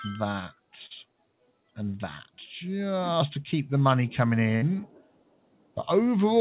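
A noise suppressor built for speech stays active across the whole clip and treats the steady parts of this audio as noise, so level swings of around 15 dB come and go. Held sound sinks and thins while sharper onsets pass, which gives a pumping, uneven feel. The audio also stops at 4 kHz, which fits a narrowband telephone codec such as G.711 mu-law.

The first sound cut by the noise suppressor falls between 0.53 and 0.73 s. There the suppressor mistakes a sustained stretch for noise and pulls it down by up to about 18 dB for a little over a tenth of a second, so the sound briefly ducks and dulls before recovering.

At 0.86 to 0.92 s comes a short concealed packet loss. Some 40 ms of audio never arrived, and the receiver bridged it with 42 ms of sound continued from what came before, then blended back in. It is heard as a quick smear or wobble rather than a clean gap.

The suppressor cuts again from 1.04 to 1.77 s, reaching about 18 dB of reduction for roughly half a second in total. 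The steady or decaying material in that span drops away and its tails are cut short, while any sudden edges survive.

A burst of packet loss follows at 4.56 to 4.64 s, where about 60 ms went missing together. The receiver held on to the last sound for 55 ms and faded it, producing a brief frozen buzz or hiss, and the audio then resumes with that stretch lost.

Last, from 4.87 to 5.81 s, the suppressor presses the sound down by up to about 19 dB over roughly a second. This is the longest dip in the clip, and the sustained content sinks and sounds hollowed out until the level returns.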